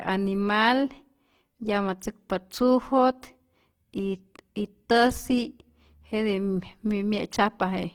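Opus compression, throughout: the speech sounds grainy and rough, likely from starved bands being refilled with noise, which fits roughly 16 kbps in music mode.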